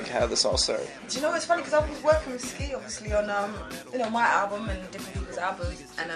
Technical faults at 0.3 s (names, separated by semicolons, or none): none